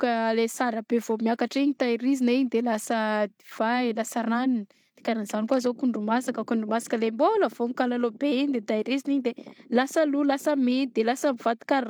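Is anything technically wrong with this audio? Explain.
No, nothing stood out as technically wrong when listening to this speech recording.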